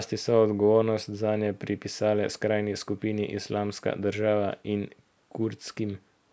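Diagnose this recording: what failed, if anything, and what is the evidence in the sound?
Nothing failed here: the speech carries the ordinary footprint of a call microphone chain, with the lowest bass rolled off by its high-pass filter and nothing above 8 kHz, and no stage between capture and playback leaves any audible defect in the signal.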